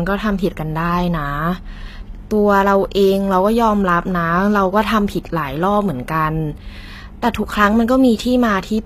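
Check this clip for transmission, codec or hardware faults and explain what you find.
One fault is present, throughout the speech. The s sounds are gritty and lispy, the treble is synthetic, and nothing sounds above 14.9 kHz, likely from HE-AAC compression pointing to roughly 20 kbps, with copied-up bands rebuilding the top.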